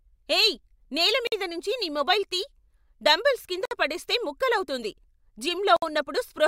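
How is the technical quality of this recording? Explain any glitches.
The speech breaks three times with short dropouts. Gap at a join of encoded pieces, at 1.27–1.32 s between "ఏయ్ నేల" and "మీద నుంచి నీ మొబైల్", at 3.65–3.71 s between "డంబెల్స్ కింద" and "పడేస్తే ముక్కలవుతుంది", and at 5.77–5.82 s. Separately encoded segments were spliced without removing each encoder's start-up delay and last-frame padding. This leaves silences of about 51, 57 and 58 ms, their edges smeared by the codec, before the speech resumes exactly where it stopped.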